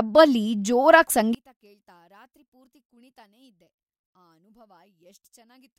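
From 1.35 s to the end, one stereo channel likely has inverted polarity, so summing to mono cancels everything the channels share. The centred speech collapses by about 33 dB, leaving only a faint residue of whatever differs between left and right.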